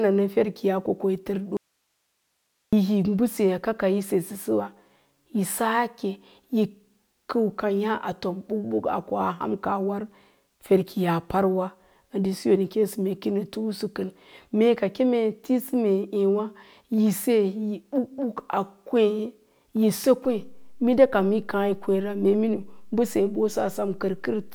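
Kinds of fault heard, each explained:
Audio dropout to a faint residue: speech cuts abruptly at 1.57 s to faint hiss for 1.16 s, likely a live path that lost its signal; the waveform collapses to a thin noise band.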